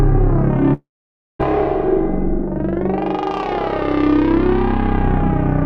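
At 0.73 s the audio cuts out until 1.41 s, which sounds like a long network dropout. The last bit of sound gets stretched into a fading buzz for a moment, then about half a second of near silence. It picks up again with roughly 0.66 s just gone.

From 4.07 s to the end there's channel delay (comb filtering). One side runs about a sample late, roughly a fiftieth of a millisecond, so summing to mono cancels the very top end, with the first notch up around 20 kHz. The top loses its air and sounds slightly dull.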